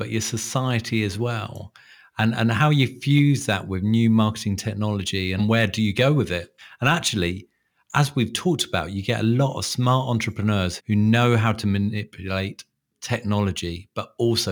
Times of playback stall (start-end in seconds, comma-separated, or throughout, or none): none